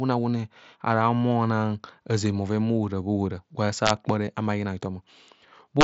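At 2.69 s there is a brief concealed Bluetooth headset packet loss. A gap of 7.5 ms, likely one lost packet, was filled by repeating a matching stretch of recent waveform. It is almost hidden. From 3.86 to 3.90 s, integer overflow strikes. Peaks pushed about 1 dB past the limit wrapped to the opposite sign, giving a sharp crack. At 4.26 s a second loss covers 15 ms, which fits two lost packets. The patch holds a short buzzy tone. From 5.81 to 5.84 s, overflow returns, about 3 dB over, and cracks again. The mSBC headset link adds a light graininess on loud sounds.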